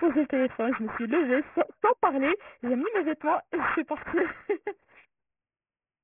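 Aliasing runs through the whole clip: the sound was taken down to a much lower sample rate, which fits a drop from 48 kHz to 6 kHz, without a low-pass filter removing the content above the new limit. Everything above 3 kHz folds back below it and lands on unrelated frequencies, only around 10 dB under the speech itself. Sibilants come out gritty and metallic, and the spectrum stays dense right up to the 3 kHz edge.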